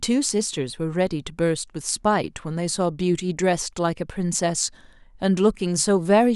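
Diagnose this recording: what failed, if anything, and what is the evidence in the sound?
Listening to the speech recording, nothing stood out that would point to a failure at any stage of the chain.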